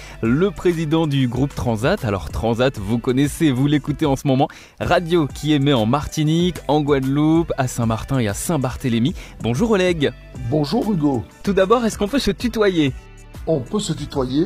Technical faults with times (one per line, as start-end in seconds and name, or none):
11.43-14.46 adaptive stream at a lower bitrate